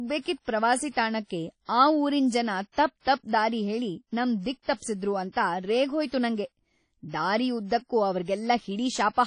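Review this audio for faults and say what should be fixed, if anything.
The speech has been through WMA compression, likely at a low bitrate around 32 kbps. The transform encoder spends too few bits per block, so weak spectral lines are zeroed and quantisation noise spreads across each long block. Nothing remains above about 10.1 kHz, and the damage is plainly audible throughout: a dull top end, ringing, and a washy hiss that swells and fades with the speech. To prevent it, encode from the original at a higher bitrate or with a better codec.

There is pre-echo from 0.91 to 0.96 s, just before "ತಾಣಕ್ಕೆ ಆ". A sharp onset fell late in a transform block, and the encoder spread noise sized for that loud attack across the whole block, including the quiet stretch before it. The result is a short hiss about 55 ms long leading into the attack, which arrives softened and smeared rather than crisp. 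To prevent it, use an encoder that switches to short blocks on transients, or raise the bitrate.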